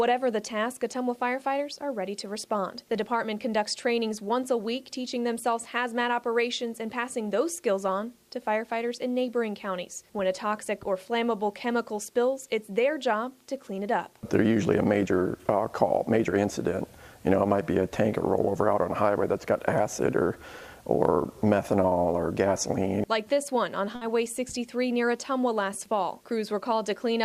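At 23.95 s, a burst of packet loss stretches and fades the last sound for 60 ms: a smeared, dimming spectrogram patch, then a skip.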